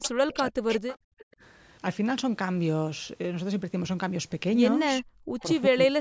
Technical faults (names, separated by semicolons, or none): speech suppressed in double talk; echo leak; background gated by the echo canceller